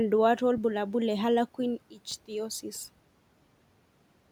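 At 2.11 s there is an underrun with held sample. The output buffer ran dry for 2.9 ms, a gap of 128 samples. The converter held its last value, so the waveform briefly flattens. Nothing was lost, so playback resumes smoothly with only a soft edge. Room noise sits about 28 dB below the speech.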